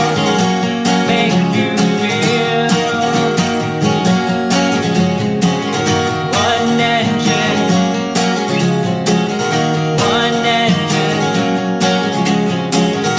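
Nothing goes wrong anywhere in this audio, so there's nothing to point to at any moment.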